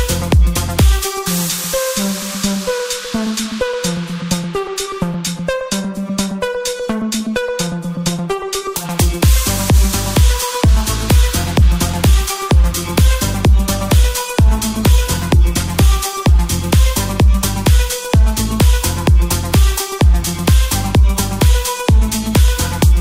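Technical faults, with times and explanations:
10.2–18.07 s, call bitrate drop: the encoder's bit budget was cut when the call's bandwidth estimate fell. The coarser coding that follows, consistent with a fall from around 64 kbps to about 28 kbps, turns the sound rougher and less detailed, with a watery texture. The worst stretch lasts roughly 5.8 s before the estimate recovers and fuller detail returns toward the end of the range.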